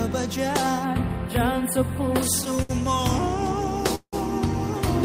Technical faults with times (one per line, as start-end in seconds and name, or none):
0.85-2.23 channel delay (comb filtering)
2.41-2.71 repeated stalls (stutter)
3.95-4.15 call audio freeze